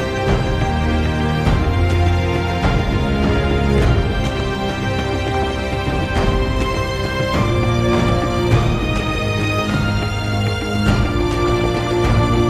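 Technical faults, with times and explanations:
5.13–5.73 s and 11.46–11.90 s, DAB burbling: Weak reception left bit errors, on the order of a few tenths of a percent, that slipped past the error correction into the MP2 audio data. Corrupted samples put short blips of noise in single sub-bands, and corrupted scale factors make sub-bands leap in level for up to a frame, across 27 and 20 frames in the two bursts. The result is a burbling laid over the programme, lasting roughly half a second each time.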